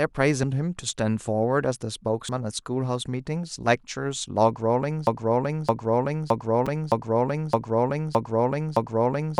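Speech clip, and it has damaged data in the compressed stream: short blips at 0.43, 2.29 and 6.66 s, where the decoder hit bad frames and lost sync briefly. Then from 5.07 s to the end there's a broken-record loop, a 0.62 s fragment repeating seven times back to back, likely because the stream stalled and kept resending its last chunk.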